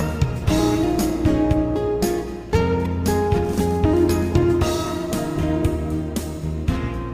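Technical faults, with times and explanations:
No technical faults can be heard across the whole clip.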